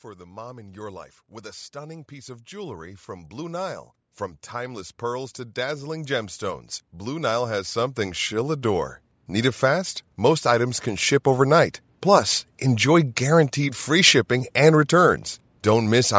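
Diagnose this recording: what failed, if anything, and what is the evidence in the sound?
Automatic gain rising at 0.17 to 3.87 s (about 8 dB), 4.52 to 6.39 s (about 4 dB) and 6.99 to 11.75 s (about 9 dB). The call processing's gain control judged the input too quiet and ramped up over seconds, swelling voice and background together.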